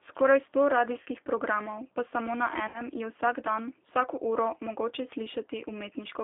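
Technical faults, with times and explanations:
throughout G.729 codec: low-rate speech coding (the sound fits 8 kbit/s G.729) rebuilds the voice from a filter and sparse pulses, giving plainly rough, synthetic speech limited to 300 Hz–3.5 kHz.
1.03–1.06 s and 2.68–2.81 s VoIP packet loss concealed by the speech codec: lost audio of 30 ms, then 60 ms, fitting one and two dropped packets, is extrapolated from the last pitch into a fading buzzy tone or coloured noise, with the voice weak briefly afterwards.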